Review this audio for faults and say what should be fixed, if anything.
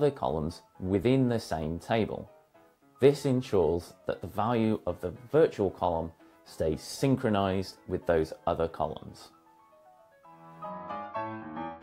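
Compressed frames skipped at 1.02 s: about one frame of the encoded stream went missing or was rejected by the decoder as damaged, so playback jumps ahead by around 20 ms. To prevent it, verify the file's integrity after encoding and transfer, and use a decoder that conceals a lost frame instead of dropping it.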